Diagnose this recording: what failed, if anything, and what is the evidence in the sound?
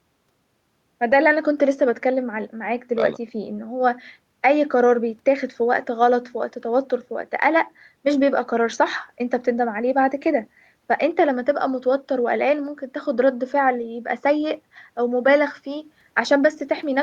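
Nothing in the signal chain has failed, and the speech signal stays continuous and stable at every stage from capture to playback.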